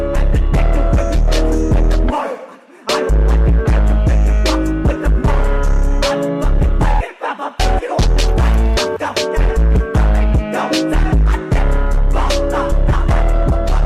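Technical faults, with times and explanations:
No technical faults detected.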